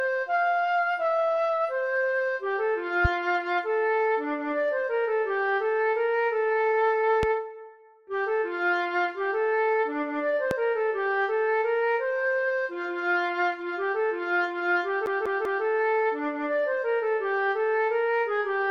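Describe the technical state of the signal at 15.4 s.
At 15.4 s the signal sits inside a CD stuck on one turn, running from 15.06 to 15.65 s. A scratch sends the laser back one track at the same point on each rotation, so a 195 ms slice of audio plays three times, with a brief mute at every jump. That regular, quick stutter, with a gap at each restart and no fading or drift, separates it from a buffer underrun's irregular dropouts.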